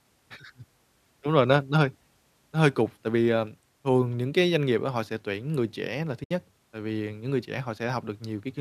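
At 6.24 s, between "tuyển người trẻ là" and "tại vì những người", the speech drops into a gap of about 70 ms, a case of AAC frame loss with muting. That span fits several consecutive short frames of the low-delay AAC coding this clip likely passed through, lost and zeroed by the decoder. Overlapping windows taper the edges, so it sounds like a soft hole. On a spectrogram it appears as a clean vertical blank across all frequencies, and in the waveform as a brief flat stretch with faded ends.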